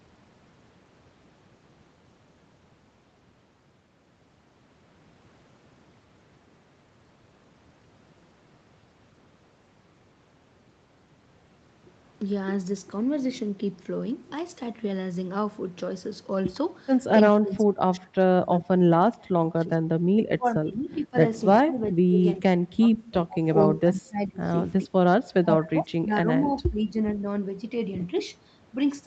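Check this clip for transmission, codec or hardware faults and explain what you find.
One fault shows up, in the second half of the speech. From 17.39 to 19.88 s, 20.19 to 21.16 s, 21.63 to 22.2 s, 22.38 to 23.45 s, 23.83 to 24.49 s and 25.28 to 26.95 s, the talker sinks, thins or breaks into fragments, by up to around 35 dB at worst. The likely cause is speech suppressed in double talk: with both ends talking, the echo canceller mistook the near talker for loudspeaker echo and pulled everything down. Throughout the clip, nothing is heard above 8 kHz, which fits a wideband Opus call path at roughly 40 kbps.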